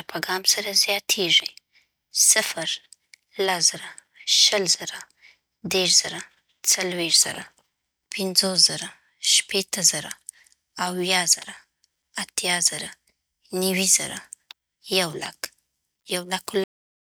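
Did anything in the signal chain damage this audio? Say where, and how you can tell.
Yes: the final buffers were never written to storage, a cut-off end. The speech stops mid-sound at 16.64 s and falls straight to digital silence without decay.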